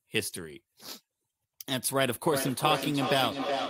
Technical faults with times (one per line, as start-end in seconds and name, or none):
2.31-3.69 feedback echo between two devices